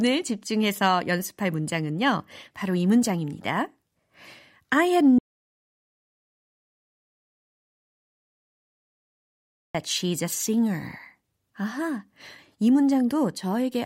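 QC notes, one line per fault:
5.19–9.75 s, audio dropout to silence. The speech cuts off mid-flow and returns abruptly after about 4.56 s. The gap is silent with no room tone. Input was likely lost while recording continued writing zeros, so that stretch is gone.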